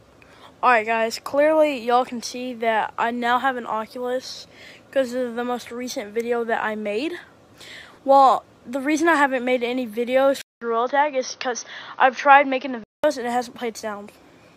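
From 10.42 s to 13.04 s the sound turns dull and narrow, with nothing above 6.4 kHz, a 200 ms gap at the change and a faint new background noise, while loudness stays about level. The likely cause is the input switched to a poorer device.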